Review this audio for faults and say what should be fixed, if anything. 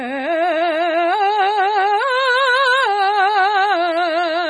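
Throughout, the music sounds dull and gurgling, with nothing above 10.4 kHz. This is likely heavy MP2 compression switching off upper sub-bands, fitting roughly 32 kbps. To prevent it, encode from the original source at a much higher bitrate or use a more efficient codec.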